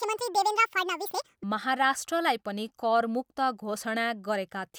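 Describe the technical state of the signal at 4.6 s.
At 4.6 s the speech signal is intact, with no audible dropout, distortion, glitch or other fault at that moment.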